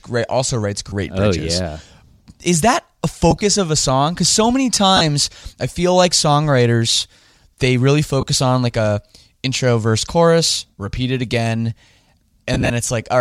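Lost LE Audio frames break the speech five times: at 0.89 to 0.93 s; at 3.31 to 3.41 s, between "that a" and "of a song", as short bursts spread over 100 ms; at 4.97 to 5.01 s, after "so many"; at 8.21 to 8.23 s, before "on like a intro"; and at 12.54 to 12.70 s, with 90 ms missing in runs of up to about 30 ms. Each gap is filled with the last spectrum replayed with random signs, so the voice smears into brief noisy hiss rather than dropping to silence or clicking. That separates it from a plain dropout.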